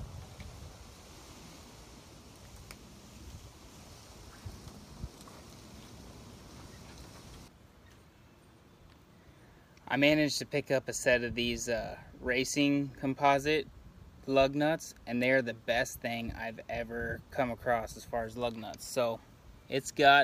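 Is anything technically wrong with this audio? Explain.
No technical faults found.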